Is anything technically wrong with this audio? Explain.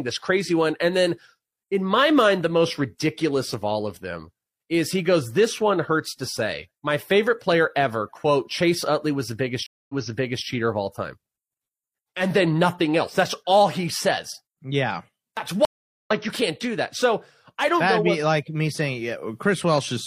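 Yes, the speech has two stream reconnect faults. At 9.66 to 10.45 s, right after "was the biggest", the audio drops out for 0.23 s, then resumes 0.56 s earlier, repeating material before "cheater of all time". At 15.65 to 16.11 s a 0.41 s gap is followed by a jump roughly 0.3 s forward, skipping audio, ahead of "you can't do that". Each time the connection broke, the player fell silent, reconnected and started a fresh decoder mid-stream at a different point.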